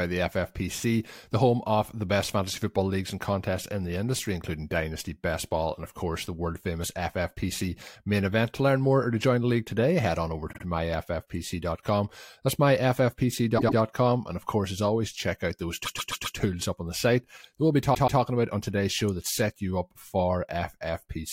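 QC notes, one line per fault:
10.52–10.62 s, repeated frames: just after "today head on over", a 52 ms block of compressed frames was delivered twice more, so that slice plays three times in a row. This fits a couple of codec frames and adds about 105 ms of stutter.
13.57–13.78 s, repeated frames: a 105 ms stretch of the compressed stream was written again twice. The decoder replays that same fraction of a second, giving a rapid triple stutter and adding 209 ms.
15.85–16.37 s, repeated frames: between "always check out those" and "up on the site", a 131 ms block was re-sent four extra times. That slice is heard five times over, a long mechanical stutter, stretching the audio by 522 ms.
17.93–18.20 s, repeated frames: after "site that we'll be" and before "about on today's show", the same 131 ms run of frames was duplicated twice. The decoder plays it three times, producing a stutter and pushing everything after it 261 ms later.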